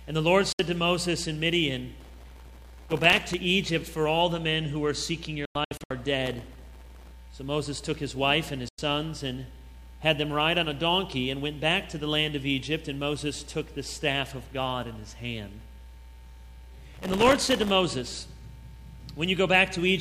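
At 0.52 s there's a digital broadcast dropout: the receiver loses good frames and mutes with a fast fade, leaving a hole of about 64 ms. It comes back at 5.45 to 5.91 s as several short holes scattered across nearly half a second, the longest around 96 ms, and again at 8.68 s for roughly 0.1 s. Whatever was sent during those gaps is simply gone.

Processor overload crackle shows up at 2.00 to 3.34 s, 6.26 to 7.11 s and 16.94 to 17.71 s. The processor keeps missing deadlines on tiny buffers, each well under a millisecond, and each miss drops in a sliver of silence. Over a hundred or so of those in a row sound like gritty tearing riding on top of the audio, and it stops once the load eases.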